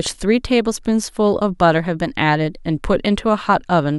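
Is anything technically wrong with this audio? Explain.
No, nothing technically wrong can be heard in this speech recording. No dropout, distortion or other fault turns up anywhere in it.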